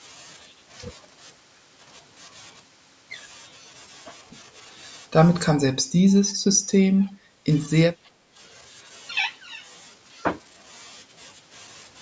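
From 5.59 to 6.18 s, 6.34 to 6.71 s, 6.89 to 7.48 s and 7.9 to 8.4 s, the speech dips by up to about 15 dB in choppy fragments. This is likely speech suppressed in double talk by an echo canceller. The waveform shows notched envelopes, and the spectrogram shows faded bands.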